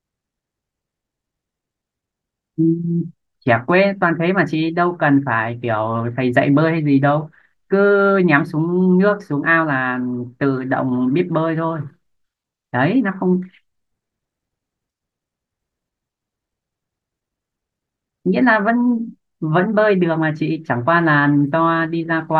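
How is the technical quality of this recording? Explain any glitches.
No audible glitches or faults.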